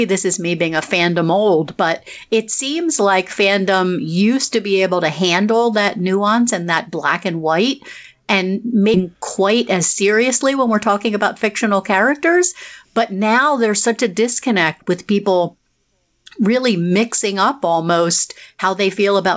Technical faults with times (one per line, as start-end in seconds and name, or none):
8.94-8.96 skip ahead
9.03-11.92 jitter buffer speed-up